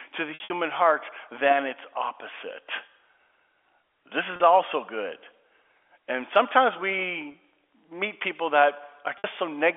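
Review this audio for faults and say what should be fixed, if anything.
Packet loss with pitch repetition occurs four times. From 0.34 to 0.50 s, between "to the" and "heart than its opposite", about 120 ms is lost in runs up to 60 ms. Short gaps follow at 4.36 s before "also good", 7.32 s before "meet people", and 9.18 s. Each time the receiver loops the last pitch period, so the sound briefly holds with a buzzy tone, and in the 60 ms runs it fades into silence before the speech returns. To prevent it, add forward error correction and a larger jitter buffer on the network path.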